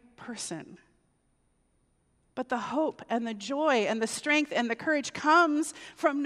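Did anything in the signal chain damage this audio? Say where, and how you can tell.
No, nothing in the signal chain damaged this audio.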